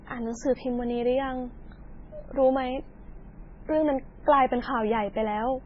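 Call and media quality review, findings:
Watery, swirly speech throughout, s sounds metallic and chirpy, nothing above 7.6 kHz, attacks smeared. Likely MP3 compression, heavy damage fitting a bitrate near 16 kbps: treble cut, weak frequency lines zeroed, flickering frame to frame.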